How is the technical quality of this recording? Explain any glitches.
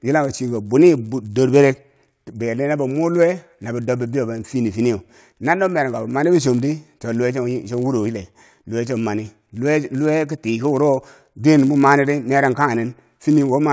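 The recording has one fault, present throughout the speech: the resampler restarted on every block. Each 10 ms block was converted on its own, which fits a 48 kHz to 16 kHz rate change, so every block edge carries a small error. At this block length the errors merge into a buzz at 100 Hz that is heard only while someone is talking. On a spectrogram this shows as a comb of harmonics spaced 100 Hz apart riding on the speech. On the waveform there are tiny discontinuities every 10 ms.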